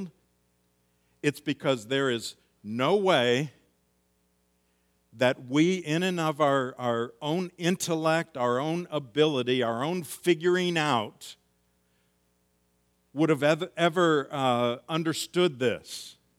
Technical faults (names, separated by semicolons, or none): none